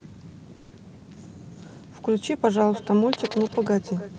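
Speech recorded over a call path, with a call audio freeze and a feedback echo between two devices. From 0.55 to 0.74 s the sound stalls into a fading buzz for about 160 ms. It then resumes where it stopped. Nothing is lost, but everything after arrives later. The likely cause is packets held up in transit, draining the jitter buffer. From 2.51 s to the end, every phrase returns roughly every 300 ms. Each repeat sounds thinner and more ringing, peaking about 17 dB below the speech. A second device in the room is replaying this call, and the first device's microphone picks it up again. The high frequencies stop around 12 kHz, as the call codec limits them.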